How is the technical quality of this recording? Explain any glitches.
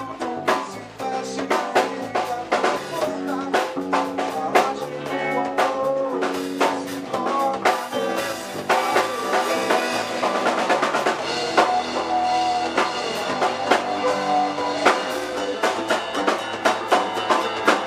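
The technical quality is good, and there are no glitches to explain.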